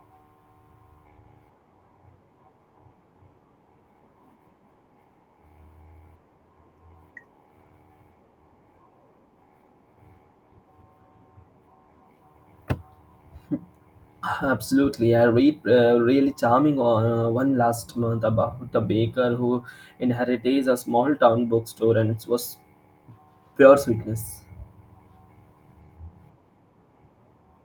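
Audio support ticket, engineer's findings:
Listened to the full speech recording: nothing stood out, no findings to log.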